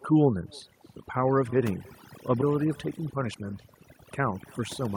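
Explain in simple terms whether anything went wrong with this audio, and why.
Overdone noise removal runs throughout: a noise reduction tool set too strong stripped out quiet parts of the voice, with twinkling specks in near-silent gaps.

Echo with no canceller is also present throughout: the far end's loudspeaker fed the voice back into its microphone, so a faint copy trails everything by about a third of a second.

A skip ahead happens at 2.41 to 2.43 s: about a second of speech was dropped, and playback jumps straight forward with no gap to cover it.

Jitter buffer speed-up occurs at 2.99 to 3.43 s (7% faster) and 4.20 to 4.95 s (15% faster): the receiver trimmed tiny slices to catch up, so speech sounds hurried at the same pitch.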